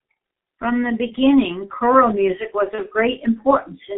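From the start, G.723.1 codec damage is heavy: band limited to roughly 150 Hz to 3.4 kHz at about 6.3 kbit/s, the spectrogram shows nothing above 3.4 kHz, smeared consonants, and hoarse, muffled speech. At 2.75 s, after "beginning choral music was", VoIP packet loss concealed by the speech codec replaces one lost 30 ms frame with a fading extrapolation, leaving weakened, distorted sound until about 2.83 s, visible as a smeared, decaying patch.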